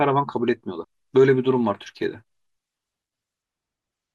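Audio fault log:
0.83 s and 2.92 s, compressed frames skipped: the audio jumps ahead, losing roughly 150 ms and then about 100 ms, which fits whole 24 ms frames being dropped.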